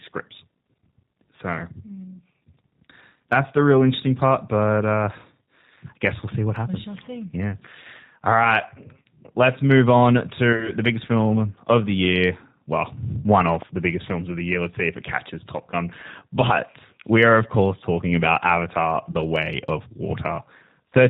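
From the start the speech sounds slightly rough and synthetic, with nothing above 4 kHz, plainly audible G.729 codec damage. That fits G.729A at 8 kbit/s, which rebuilds speech from a vocal tract filter, a pitch predictor and a few pulses per frame.

At 9.02 s, just before "let's move on", the sound smears briefly into a buzzy, fading tone. This is VoIP packet loss concealed by the speech codec, here about 30 ms of lost audio. The decoder extended its last pitch and filter at falling gain, and the voice stays weakened briefly afterward. The same concealment smears the sound again from 10.53 to 10.73 s, between "let's move on" and "the biggest film of", with about 40 ms lost in short gaps scattered across 80 ms. Shorter buzzy blurs follow from 16.01 to 16.05 s and 19.12 to 19.15 s, each about 20 ms lost.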